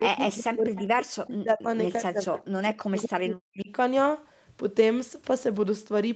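From 0.0 to 1.68 s, and again from 1.98 to 3.71 s, the speech dips by up to about 40 dB and breaks up. This is likely speech suppressed in double talk, with the canceller ducking both sides. Around 0.78 to 0.85 s, a faint scrap repeats the voice about 206 ms late, roughly 20 dB down. This is likely an echo leak from a loudspeaker.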